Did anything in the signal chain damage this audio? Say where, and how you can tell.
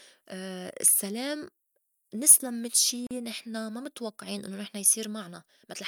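Yes. The codec stage left a gap at a join of encoded pieces. Speech cuts to silence from 3.07 to 3.11 s, a 41 ms hole. Its edges are smeared by the codec. Sound resumes where it stopped. Untrimmed encoder delay and padding remain at the join.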